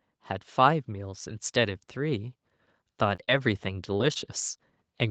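Automatic gain rising runs from 1.54 s to about 4.35 s. The gain control judged the incoming level too low and lifted it slowly, by about 4 dB over nearly three seconds. Because the gain acts on the whole signal, the speech and the background noise swell together. There is no sudden jump, just a gradual increase in presence and room sound, with the upper limit near 8 kHz from the call path unchanged.

Short concealed packet loss occurs four times while the gain is still rising: at 3.15 to 3.20 s, 3.24 to 3.30 s, 3.98 to 4.02 s, and 4.14 to 4.17 s. Each time a short stretch of the call, roughly 20 ms or about 40 ms for the second, did not reach the decoder in time. The receiver filled each hole by extending the last sound and then blending back into the real audio. The result is a brief smear or wobble.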